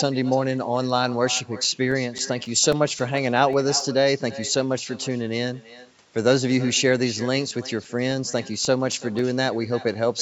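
Echo with no canceller runs through the whole clip. Each phrase returns roughly a third of a second later, about 18 dB down and thinner. The far end's loudspeaker is feeding its microphone, and nothing removes the copy before it travels back.

CD scratch ticks start at 1.37 s and continue to 3.80 s. Ten regular ticks of uneven strength, each only a few milliseconds long. A second burst of eight runs from 7.57 s to 9.46 s. Damaged disc data exceeded the error correction, so the player patched or muted those samples on each turn.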